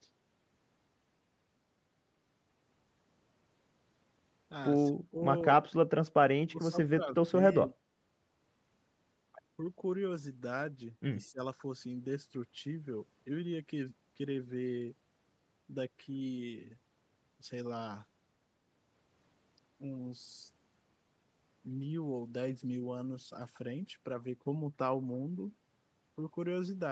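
At 4.93–5.21 s, 6.4–7.31 s, 7.5–7.79 s and 11.28–11.4 s, the speech sinks by about 25 dB (about 15 dB in the last), likely speech suppressed in double talk.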